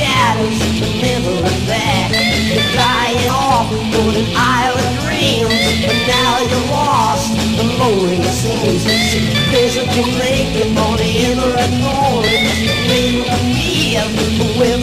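Damaged data in a compressed stream corrupts two short stretches of the file, so the decoder misreads those frames and loses sync until it finds the next valid header. The sound breaks into a brief glitch from 3.25 to 3.29 s and again from 10.04 to 10.06 s.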